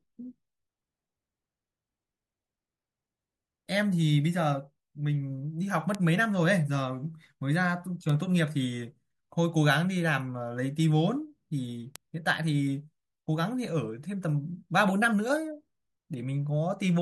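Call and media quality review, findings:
Bit error spikes at 4.50, 5.95, 8.09 and 11.96 s: isolated sharp broadband ticks over the speech, peaking about −32, −14, −14 and −8 dBFS. Probable component: memory or digital link corrupting individual sample words. Mechanism: one flipped bit throws a sample, or a few adjacent ones at 5.95 s, off by a power of two, then the waveform snaps back. The tick bears no relation to the speech underneath.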